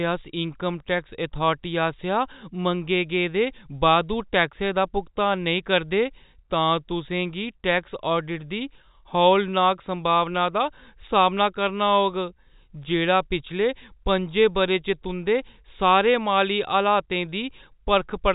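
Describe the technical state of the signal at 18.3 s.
At 18.3 s the speech is intact, carried in the narrow telephone band of G.711 coding with nothing audible above about 3.8 kHz.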